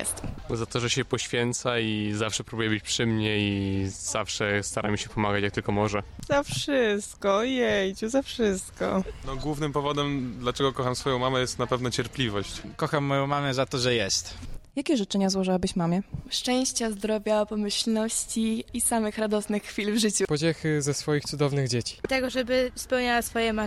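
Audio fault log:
10.59 s, compressed frames skipped: the sound jumps ahead by about 20 ms where whole coded frames were never decoded.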